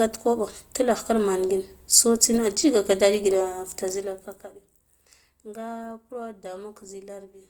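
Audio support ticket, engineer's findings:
Whole clip, 0 to end: speech with plainly audible codec damage, grainy, rough texture rather than swirl. Likely cause: Opus compression in CELT music mode, fitting about 24 kbps. Band energy preserved, starved bands filled by folding or noise, so few spectral holes. Unlike MP3, no watery swirl. Bandwidth still full, content to 20.2 kHz, so no narrowing or switch to speech mode.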